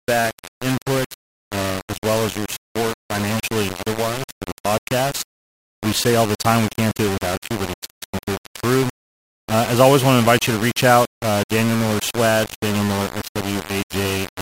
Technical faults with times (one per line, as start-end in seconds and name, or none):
0.00-14.41 low bit depth without dither